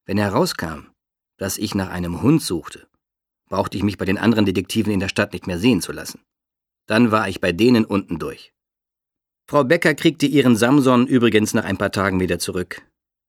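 Nothing in here stands out as a technical problem; the audio just runs along without any glitches or dropouts to point at.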